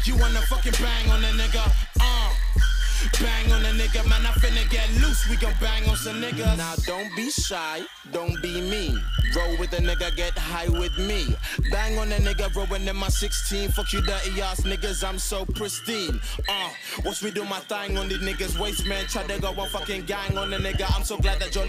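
From start to end, a block size mismatch (padded) leaves a short zero-filled gap in every block, producing a steady 43.1 Hz buzz, which fits 1024-sample reads. The audio runs only 0.999 times normal speed, timbre unchanged. The waveform shows regular dropouts; the spectrogram shows evenly spaced vertical stripes.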